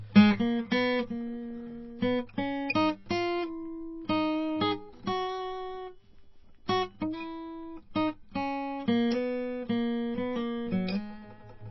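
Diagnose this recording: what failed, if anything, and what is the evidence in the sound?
MP3 compression throughout, codec stage: the music has nothing above 5.8 kHz and plainly audible watery swirl, likely a bit-starved encoder, fitting about 24 kbps.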